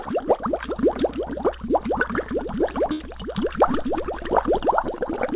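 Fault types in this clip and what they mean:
mains hum: A steady low 60 Hz tone, around 20 dB below the sound, runs from 0.45 to 4.66 s, coupled in from power lines via a ground loop or transformer.
burst of packet loss: At 2.92 s the last sound is held and fades for 75 ms, then resumes with about 80 ms skipped, because packets arrived too late or never.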